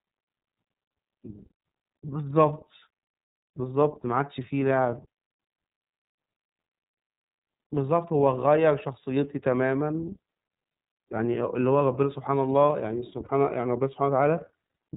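The whole clip carries the iLBC codec: everything above 4 kHz is gone, and the speech has that slightly rough, synthetic edge. The damage is plainly audible, and the sound points to iLBC's 30 ms frame mode at about 13.3 kbps.

From 13.25 to 13.30 s there's a lost iLBC frame, which fits a single 30 ms frame going missing. The decoder fills the hole by repeating the last pitch cycle mixed with noise, so you hear a brief buzzy, held vowel before the speech snaps straight back.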